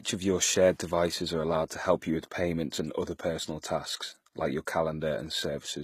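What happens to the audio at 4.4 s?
At 4.4 s the speech carries the same damage as the rest of the clip, likely HE-AAC compression. Only the lower spectrum is coded. The treble is copied up from lower bands and roughly shaped, so s sounds turn gritty and lispy. Nothing sounds above about 14.9 kHz. The damage is plainly audible and fits a low bitrate near 20 kbps.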